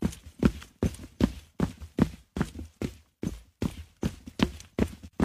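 No technical faults can be heard in this recording.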